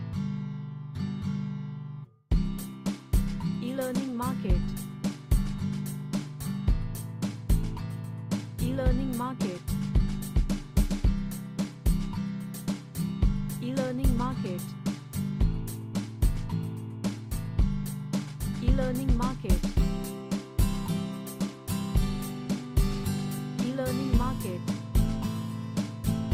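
No technical faults are audible.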